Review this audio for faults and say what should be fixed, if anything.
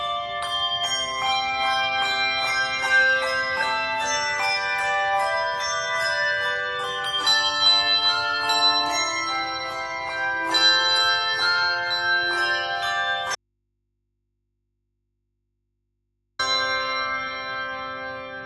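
An audio dropout to a faint residue runs from 13.35 to 16.39 s. The sound cuts abruptly to mains hum roughly 50 dB down, likely a lost connection with the input left open, unlike a pause or fade. Secure connectors and monitor input continuity.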